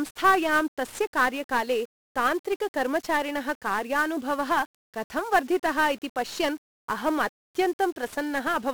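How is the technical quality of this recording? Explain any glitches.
Poor. The speech carries heavy 1-bit DFPWM compression throughout. Each sample is a single bit nudging an adaptive level up or down. The result is dense fuzz, crackle and hiss that swamps the treble. The roughness points to a low rate near 48 kbps.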